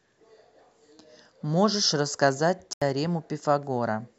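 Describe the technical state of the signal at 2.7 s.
A block of digital silence runs from 2.73 to 2.82 s, about 85 ms, consistent with a 4096-sample buffer not filled in time. The speech drops abruptly to silence and returns, a short hole. The waveform goes flat; the spectrogram shows an empty vertical gap.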